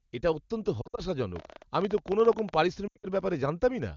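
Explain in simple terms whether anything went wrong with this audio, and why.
Lost AMR speech frames: twice, radio errors corrupted chunks of the phone call's speech data, so the decoder replayed its last good settings at falling volume. Just after "এটা অত্যন্ত", from 0.82 to 1.01 s, and again from 2.87 to 3.06 s, the speech smears, briefly fades out, then returns weak or rough.

Train of clicks: from 1.36 to 2.55 s, something likely electrical interference or a struggling audio connection adds sharp pulses, around 16 per second at an uneven pace. They are heard as ticking or popping laid over the HD Voice sound.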